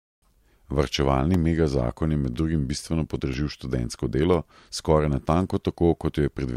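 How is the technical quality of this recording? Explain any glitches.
The recording has a recurring glitch in the speech. Periodic USB or driver dropouts occur about once per second, from 0.34 s to 4.34 s, about five in all. Something on the system is probably stalling the USB connection or audio driver at a regular interval. Each stall loses around a millisecond of audio, which is replaced by silence. These brief gaps break the waveform abruptly, so they are heard as small, evenly spaced ticks riding on the speech.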